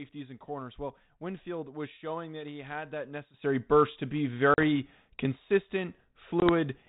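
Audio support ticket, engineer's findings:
Sudden gain jump at 3.34 s, right after "that he had that": level steps up about 12 dB and holds to the end. Background noise rises with the sound and there is no gap, so this is not dropout. Likely cause: a gain setting or bit shift applied without a ramp.

Packet loss on an ADPCM call at 4.54–4.63 s (about 40 ms missing) and 6.40–6.51 s (about 20 ms), consistent with two packets and one packet lost. Each gap is a hard-edged silence. On return there is brief slight distortion that settles within tens of milliseconds. This is decoder predictor and step-size mismatch, not a lasting level change. The ADPCM path itself is band-limited below 4 kHz with only light coding grain, consistent with 32 kbit/s G.726.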